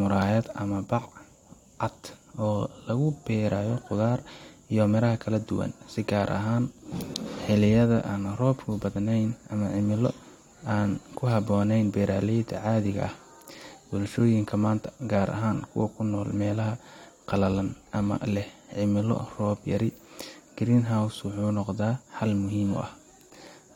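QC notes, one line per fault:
No faults heard anywhere in the speech.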